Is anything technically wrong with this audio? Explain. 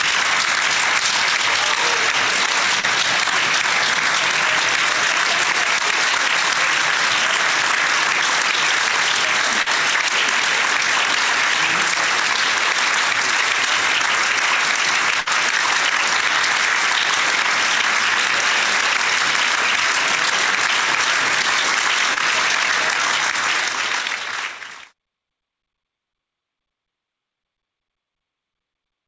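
Yes, there are four brief dropouts, all of the kind a call path produces when audio packets fail to arrive. The audio also carries the band limit of a G.722-style call codec, with nothing above 8 kHz, which fits a 64 kbps wideband link.

Short concealed packet loss occurs at 2.80 to 2.85 s, 9.62 to 9.68 s and 22.14 to 22.18 s. Each time, a small slice of audio, about 40 ms in the first two cases and 20 ms in the third, never reached the decoder. The receiver patched the hole by extending the preceding sound and then blending back into the real signal. This is heard as a quick smear or wobble.

A burst of packet loss occurs at 15.20 to 15.28 s. Here roughly 60 ms went missing in a row, so the receiver had to keep the last sound going for nearly the whole gap while letting it fade. That produces a short held buzz or dying hiss, after which the audio picks up slightly further along, with that stretch of sound gone.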